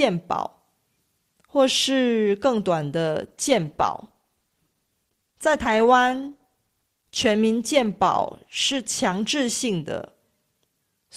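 At 3.21 s the adaptive stream drops to a lower bitrate. The connection evidently slowed, so the player switched to a leaner encoding of the speech for six seconds, until 9.21 s. The swap is abrupt and leaves no gap. Codec artefacts rise, which points to a step down from roughly 64 kbit/s Opus to about 16 kbit/s. At 9.21 s the fuller sound returns just as suddenly.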